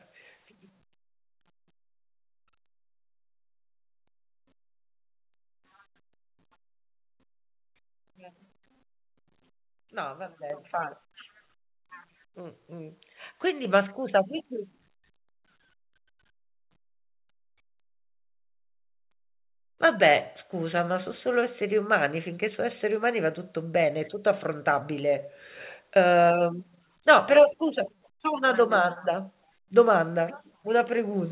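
At 10.5 s, 13.65 s and 14.67 s the microphone volume is stepped up, by about 7 dB, then about 5 dB, then about 2 dB. Each time the input gain on the device was raised in a single jump, so the speech and the background noise both get louder at once. On a waveform the envelope steps up sharply at each point, and a spectrogram brightens across all bands together, within a band that stops at 4 kHz, which fits a G.711 call path.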